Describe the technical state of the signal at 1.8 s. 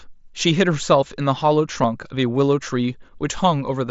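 At 1.83 s there is a concealed Bluetooth headset packet loss. About 7.5 ms of audio goes missing, which fits a single lost packet. The receiver fills the gap by repeating a closely matching stretch of the preceding waveform. Being so short, it is nearly inaudible.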